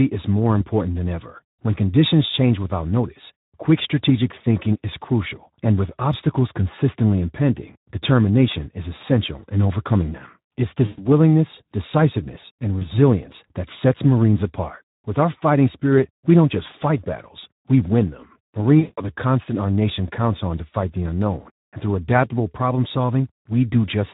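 Speex codec damage runs through the whole speech clip. This CELP codec is working with too few bits for the excitation signal. The result is plainly audible. Speech sounds noisy and hoarse. The band above 8 kHz is only a shaped noise fill. All of this fits a low setting of about 11 kbps.

The first case of VoIP packet loss concealed by the speech codec comes at 10.86 to 11.0 s. About 120 ms of audio is gone. The decoder carries on from its last pitch and filter and lowers the gain frame by frame. The sound stretches out and fades. A shorter gap of about 20 ms follows at 12.79 to 12.87 s. The longest, about 180 ms, runs from 18.79 to 19.1 s. There the fill decays. Each frame builds on the one before, so the voice stays weak or distorted briefly after each gap.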